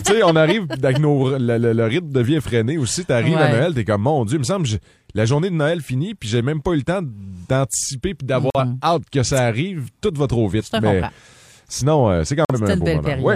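At 8.50 s and again at 12.45 s the sound snaps abruptly to silence for about 0.1 s. This is corrupt frame muted: the decoder rejected damaged compressed frames and the player substituted silence. Unlike concealment, nothing fills the hole, and timing resumes unshifted.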